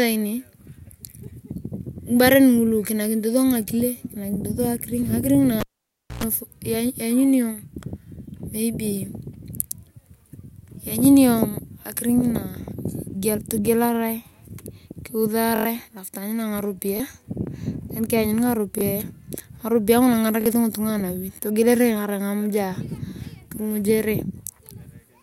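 At 5.60 s the cable is pulled and plugged in. A pop opens a gap of about 0.59 s of near silence in the speech, then a burst of roughly 0.11 s of 60 Hz mains buzz as only the tip makes contact, and a second pop when the signal returns at 6.24 s. On a waveform, two sharp spikes bracket a flat line. A spectrogram shows full-band vertical streaks at each pop and a stack of 60 Hz harmonics during the buzz.

From 15.56 s onward comes a repeated buffer fault. The playback device ran out of fresh audio and replayed its last block of about 23 ms, which fits a 1024-sample buffer. At 15.56 s the block plays four extra times, a stutter that swallows about a tenth of a second of speech. Single repeats at 16.97 s and 18.79 s and a double repeat at 20.41 s give further short stutters. On a spectrogram, identical slices tile side by side with hard vertical seams. On the waveform, the same short shape repeats exactly.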